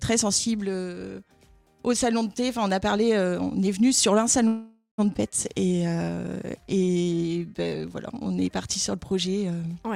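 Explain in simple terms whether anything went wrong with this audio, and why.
At 4.47 s the sound stalls for about half a second, until 5.00 s. The last bit of audio is drawn out as a fading buzz that ends in a brief moment of silence. This is a call audio freeze, likely caused by delayed packets. Unlike a skip, nothing is lost: the audio resumes where it stopped.

Just after, at 5.14 s, comes a skip ahead. Playback jumps forward, dropping roughly 0.4 s of audio, with the two sides joined almost seamlessly. Here the gap is missing content, not added waiting.

From 5.53 to 6.16 s and from 6.56 to 8.41 s there is a jitter buffer slow-down. The audio runs at about 84% and 86% of normal speed, adding 0.11 s and 0.27 s, with stretched sounds but unchanged pitch. Unlike a freeze, it keeps flowing and never stops.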